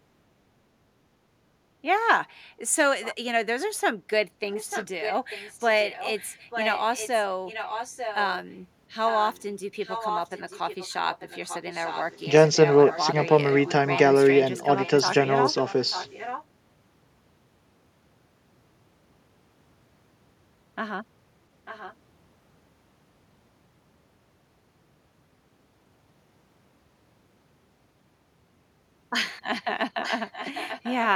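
A faint repeat of the speech, roughly 15 to 20 dB down, trails about 0.89 s behind at 3.02–3.15, 4.52–8.31, 9.06–13.9, 14.8–16.44, 21.65–21.94 and 30.03–30.93 s. This is echo leak, likely from the far side's loudspeaker audio slipping past its echo canceller.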